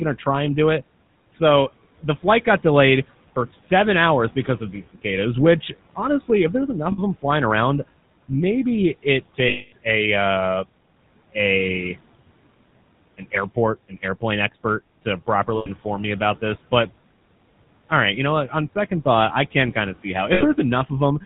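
GSM full-rate codec damage runs through the whole speech clip. The voice has the gravelly, buzzy roughness of a coder that models the vocal tract and rebuilds the excitation from regularly spaced pulses, keeping only a third of its samples, which fits the 13 kbps full-rate scheme. Nothing above 4 kHz survives, so the sound is dull and narrow as well as rough. The room noise sits about 23 dB below the speech.

Lost GSM frames occur four times. At 6.92 s, between "honestly if there's enough" and "them flying around maybe", a 60 ms gap is filled by repeating the last good frame, giving a short metallic ring. At 9.48 s, after "flying around maybe it" and before "a uh", the loss lasts 240 ms, so the rough, metallic ring is held longer. Similar rough holds follow at 15.56 s (100 ms) and at 20.34 s (60 ms) after "kind of see how".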